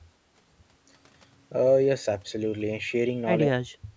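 Speech suppressed in double talk appears from 3.46 s to the end of the clip at 3.97 s. The level dips sharply, at its deepest roughly 35 dB down, across about 0.4 s of that stretch. This is likely an echo canceller that could not tell the near talker apart from loudspeaker echo while both sides spoke, and so attenuated everything. The call microphone processing's band limit at 8 kHz remains in place throughout.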